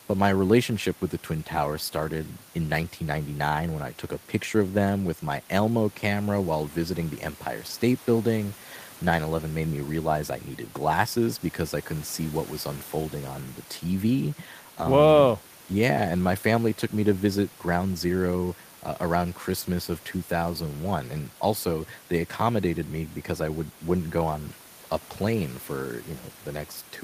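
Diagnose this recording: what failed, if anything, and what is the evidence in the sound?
Nothing stood out on listening to this speech recording, and the only background is ordinary room noise sitting about 26 dB below the speech.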